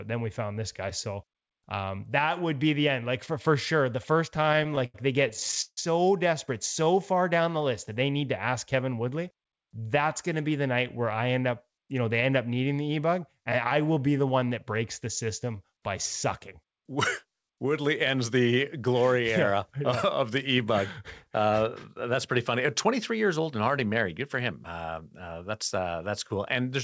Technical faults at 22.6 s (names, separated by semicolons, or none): jitter buffer speed-up